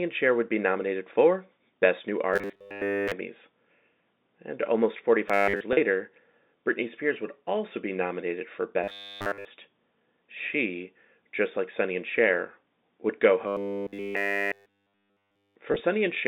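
Speech in a telephone band of roughly 200 Hz to 3.7 kHz shows robotic sound from repeated short buffers at 2.34–3.13, 5.29–5.61, 8.84–9.45 and 13.48–15.56 s. A rigid 100 Hz buzz is imposed on the voice, likely from a 10 ms buffer replayed while fresh audio is skipped. Packet loss with pitch repetition is much briefer: about 40 ms lost at 5.73–5.77 s, and again at 15.72–15.80 s in gaps of at most 20 ms. It sounds like a slightly held, buzzy note that keeps the voice's own pitch rather than a fixed one.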